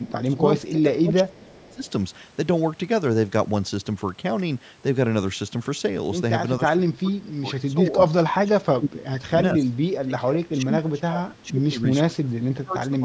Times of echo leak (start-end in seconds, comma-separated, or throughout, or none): 1.34-1.90